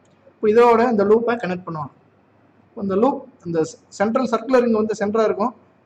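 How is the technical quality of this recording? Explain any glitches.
One glitch stands out: a drift correction step from 1.17 s to 2.64 s. The sound abruptly runs about 5.6% fast, raising pitch by about 95 cents, nearly a semitone, then snaps back. The likely cause is clock-matching software stepping the playback rate to rebalance its buffer. Unlike wow or flutter, which waver continuously, this shift starts and ends suddenly and holds steady in between, so it sounds like a brief detuning rather than wobble.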